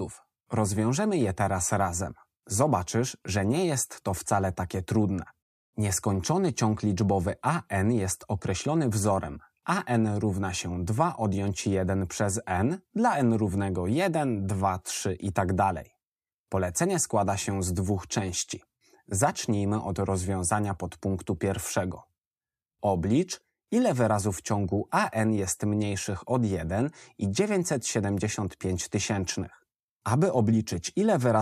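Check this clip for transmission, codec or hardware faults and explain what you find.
Nothing stood out on listening to this clip.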